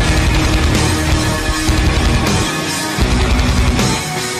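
From start to finish the audio shows hard clipping. The signal drives about 6 dB past what the chain can pass, so its peaks are sliced flat, affecting somewhat under a tenth of the samples. Those squared-off tops add harmonics high in the spectrum, heard as crackle on the peaks. Unlike soft saturation, which rounds peaks gradually and sounds warm, this edge appears abruptly as level rises and stays brittle.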